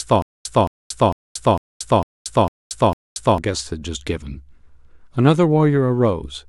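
Stutter with silent gaps is already under way when the speech begins and lasts until 3.38 s. A 221 ms burst repeats seven times, each followed by 230 ms of digital silence, so the same fragment returns every 452 ms at a steady pace. The likely cause is a stalled player or stream that replays its last buffered fragment at each retry and then runs empty, so the speech that belonged in those gaps is lost.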